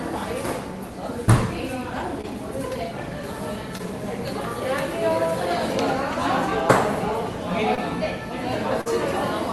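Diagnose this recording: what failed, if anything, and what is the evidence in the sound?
Short concealed packet loss at 2.21, 3.77, 7.75 and 8.81 s, a network fault masked in the Opus decoder. Each gap, about 20 ms (40 ms at 8.81 s, which fits 20 ms frames), was filled by extending the preceding sound, then crossfaded back, leaving brief smears or wobbles.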